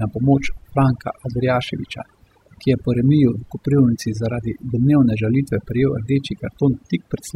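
Right from the start and all the way through, this speech has overdone noise removal. The noise reduction was pushed too hard, so any frequency band sitting close to its idea of the noise floor got pulled way down or switched off entirely, taking the quieter parts of the voice along with it. What you hear is a background that drops away and breaks up into little twinkling, warbling specks.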